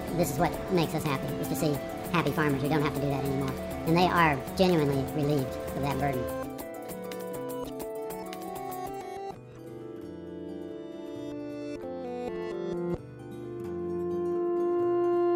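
From 0.0 to 9.35 s, a wrong sample rate makes the sound run 1.5 times fast and about 7 semitones high, which fits 32 kHz material played at 48 kHz. Tempo and pitch rise together, unlike a pitch shift.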